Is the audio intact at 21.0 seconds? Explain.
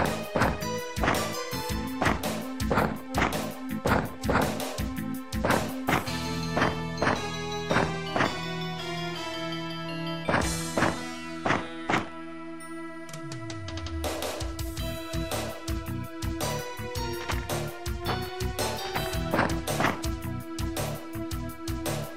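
Yes, the audio is intact at 21.0 seconds, with no dropout, glitch or other fault at that moment.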